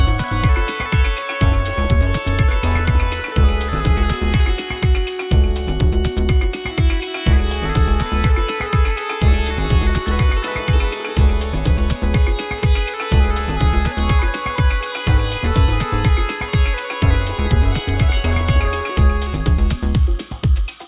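No faults can be heard anywhere in the clip.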